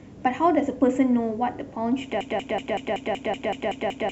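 A likely stall left the stream resending one 0.19 s fragment, a broken-record loop: from 2.21 s to the end the speech repeats back to back about ten times.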